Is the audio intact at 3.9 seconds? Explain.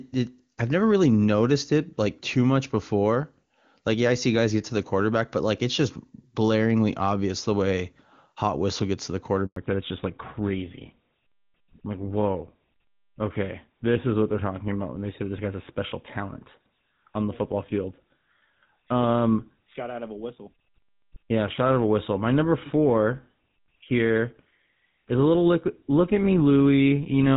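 Yes, the audio is intact at 3.9 seconds, with the AMR wideband (HD Voice) codec at 23.85 kbit/s leaving no more than faint coding traces there.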